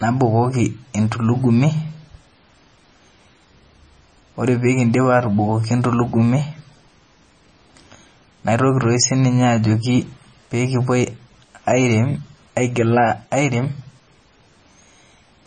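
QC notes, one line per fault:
Throughout: MP3 compression, likely. Nothing is heard above 9 kHz, so the treble is gone. The damage is heavy. Speech sounds watery and swirly, and s sounds come out as metallic chirps. Weak frequency detail keeps switching on and off between frames. Consonant attacks are smeared. This points to an encoder starved of bits, around 24 kbps. It cut the top band at a fixed frequency and dropped quiet components it judged inaudible.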